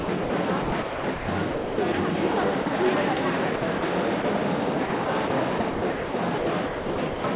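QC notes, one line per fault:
0.0–0.3 s, 0.62–1.94 s, 3.56–3.82 s, 4.86–5.3 s, 5.58–7.24 s: sound chopped by the voice detector. Each span has holes filled with steady comfort noise: 140, 740, 100, 80 and 920 ms respectively. The sender's detector likely toggled transmission on quieter sound.
2.62–2.66 s, 4.22–4.24 s: sound dropped by the voice detector. The sound gives way to comfort noise for 40 ms and 20 ms, likely because the detector took quieter sound for background.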